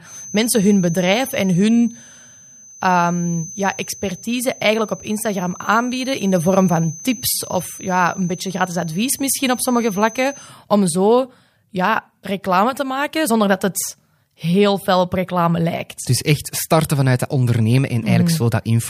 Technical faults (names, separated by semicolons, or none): feedback whistle